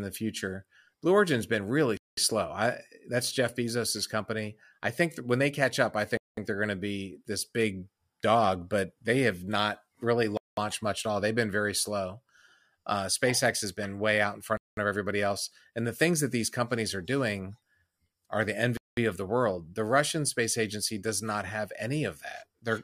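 A speech clip broken by five short holes of silence, each about 200 ms long, at 1.97, 6.17, 10.37, 14.57 and 18.77 s, the first falling between "been really" and "slow I that's". This is a gap between chunks: the audio arrives in 4.0-second blocks, and silence is inserted at each join, so nothing is lost but the sound stops and restarts on a steady rhythm of about 4.2 seconds.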